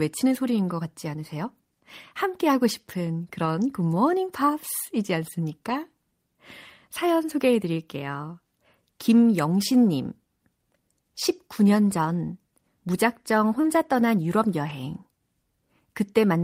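Lost packets rebuilt from error correction occur at 3.45–3.47 s, 5.69 s, 9.51–9.53 s, 13.63–13.65 s and 14.69–14.71 s, each a single 20 ms packet. The packet that followed each loss carried a low-bitrate duplicate of the missing one, and the decoder played that copy. There is no silence, but each 20 ms stretch of speech briefly turns coarser and grainier before the full-quality stream resumes.

A short concealed packet loss at 13.61–13.65 s overlaps the rebuilt packet at 13.63 s. Here 20 ms of speech never arrived in time, and the receiver invented roughly 19 ms to cover it by extending the preceding sound, following its pitch where the speech was voiced and using shaped noise where it was not. It then blended back into the real audio. The result is a quick smeared wobble right before that rough rebuilt frame.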